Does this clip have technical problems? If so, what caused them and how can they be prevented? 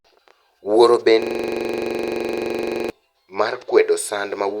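Yes. A system hang loop runs from 1.22 to 2.90 s: the computer or driver stalled while the sound hardware kept replaying one 43 ms slice of its buffer, which fits a 2048-sample buffer. The speech dissolves into a rapid stutter repeating at 23.4 Hz dozens of times. Preventing it requires fixing the driver or system stall and having the audio path output silence rather than recycling stale buffer contents.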